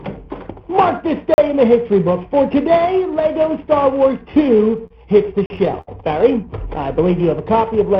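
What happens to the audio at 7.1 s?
At 7.1 s the audio falls inside a jitter buffer slow-down that runs from about 7.00 s to 7.59 s. The receiver's buffer was short of data, so it stretched what it had. It repeated single pitch periods and small slices of quiet to build a reserve. That adds about 37 ms over the span. Playback drops to roughly 95% speed while the pitch stays put. Sounds drag slightly.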